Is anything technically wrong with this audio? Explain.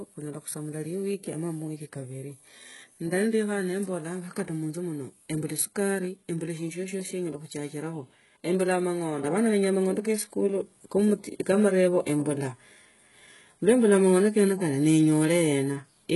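Yes. Throughout the speech there is heavy damage that points to HE-AAC compression at a very low bitrate, likely around 12 kbps. The codec keeps only the lower spectrum and rebuilds the treble by copying lower bands upward under a coarse envelope, so the top end sounds bright but synthetic, with nothing above 11.4 kHz. S sounds come out gritty, metallic and lispy, and that false, misaligned brightness is what separates it from a plain low-pass cut, which would sound dull.

At 9.24 s a sudden gain jump lifts the level by about 6 dB and it stays up to the end. The step is likely a digital gain change applied between two samples with no ramp. The voice and the background noise rise together at once, which tells it apart from a compressor or automatic gain control, where the level would swell or pump gradually and follow the speech.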